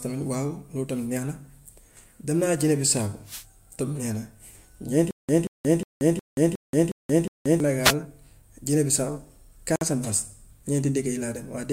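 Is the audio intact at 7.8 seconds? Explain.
No. At 7.82 s there's a wireless microphone noise hit that lasts until about 7.95 s, so roughly an eighth of a second. What's happening is the FM radio link from the mic dips for a moment, with reflected copies of the signal cancelling the direct one, and the receiver's own noise rises. You hear it as a quick swish of static before things clear up.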